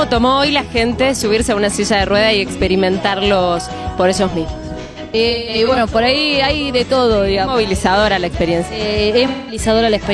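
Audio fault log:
4.83–5.78 s and 9.27–9.59 s, AAC frame loss with concealment: the decoder lost 512 ms of frames in short bursts (longest roughly 150 ms), then 213 ms, and patched each gap from the last good spectrum, leaving smeared, noisy, phasey stretches instead of silence.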